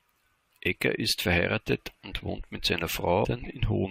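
At 3.24 s, right after "und wohnt mit seiner", there is a brief burst of damaged data in a compressed stream. It lasts about 12 ms. Part of the encoded speech arrived wrong at that point. The decoder could not read those frames properly and lost its place. It then had to hunt for the next valid frame header before normal decoding resumed. The result is a short glitch in the speech.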